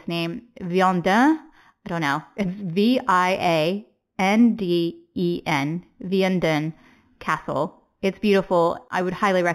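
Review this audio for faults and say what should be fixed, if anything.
Imaging from linear upsampling runs throughout the speech. Straight-line interpolation, which points to an 8 kHz source raised to 44.1 kHz, leaves a mirrored copy of the band between 4 kHz and 8 kHz, roughly 25 dB down, heard as metallic shimmer on sibilants. To prevent it, resample with a proper band-limited filter that removes everything above the original 4 kHz band edge.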